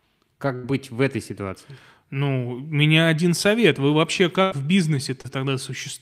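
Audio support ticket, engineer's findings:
Burst of packet loss, 0.55–0.65 s and 4.43–4.53 s. Network dropped or late-delivered roughly 80 ms of consecutive speech each time; receiver concealment extended the last sound for about 75–80 ms, fading it out. Heard as a held buzz or decaying hiss, then speech resumes with that stretch gone.

Short concealed packet loss, 5.21–5.40 s. About 40 ms missed the decoder deadline; concealment synthesised roughly 30 ms from the preceding pitch or noise, then crossfaded back, stretching timing slightly. Heard as a brief smear or wobble, possibly swallowing a short consonant.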